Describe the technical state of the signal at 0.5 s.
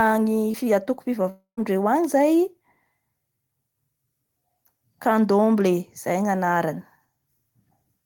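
At 0.5 s the speech passes through a short concealed packet loss, from 0.51 to 0.56 s. About 20 ms of the call arrived too late to decode, and the receiver covered it with 22 ms of synthesized continuation, extending the preceding sound's pitch or noise shape before blending back into real audio. It is heard as a brief smear or wobble. Unlike a plain dropout, there is no silent gap, and unlike a click, the change is smooth rather than a sharp spike.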